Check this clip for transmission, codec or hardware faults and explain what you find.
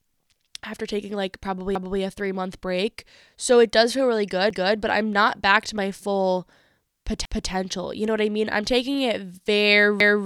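The speech shows one transmission fault, overlapping chunks, occurring four times. At 1.75 to 2.00 s (after "after taking like probably"), 4.50 to 4.75 s (between "it does feel really" and "but I'm not back"), 7.25 to 7.50 s and 10.00 to 10.25 s, a 250 ms stretch plays twice. The audio was handled in blocks 2.5 s long, each starting before the previous one ended, so every join replays its tail and produces a regular stutter.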